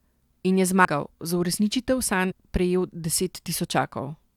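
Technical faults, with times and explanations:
0.84–0.86 s and 2.30–2.32 s, compressed frames skipped: the sound jumps ahead roughly 100 ms, then 70 ms, in 23.2 ms frame steps.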